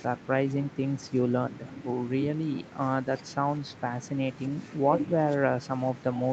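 A speech recording that has passed through a call's microphone processing, with nothing technically wrong with it.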